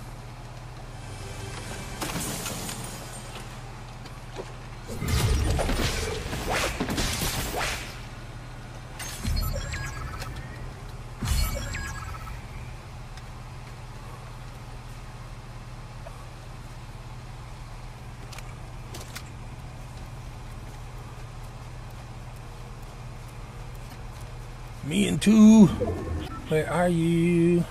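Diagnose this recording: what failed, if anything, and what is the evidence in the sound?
The failure is damaged data in a compressed stream, at the codec stage. Short disruptions occur at 4.01–4.07 s, 16.05–16.08 s, 23.90–23.93 s and 26.24–26.30 s, each 30 to 56 ms long. Corrupt bytes make the decoder misread frames and lose sync until it finds the next valid frame header.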